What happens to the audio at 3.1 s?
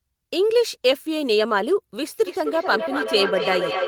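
At 3.1 s you're in the middle of a feedback howl. It starts at 2.26 s and runs to the end of the clip. Sound from the loudspeaker gets back into a microphone on the same call and is played out again a bit louder on each trip, so it piles up into a ringing tone around 500 Hz. The loop repeats roughly every 300 ms, and the howl peaks at about 4 dB below the speech level.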